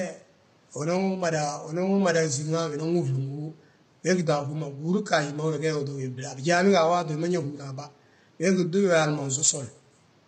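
Throughout, the speech sounds rough and grainy, with noise between harmonics and a lowered or synthetic top band. Heavy low-delay AAC compression is the likely cause, fitting roughly 24 kbps.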